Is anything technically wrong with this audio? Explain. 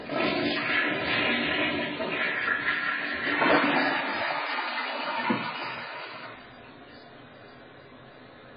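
Yes, throughout there's nothing above 5 kHz and a smeared, warbly texture. That's likely heavy AAC compression, the kind you'd expect at roughly 12 kbps, with the codec discarding detail it can't afford.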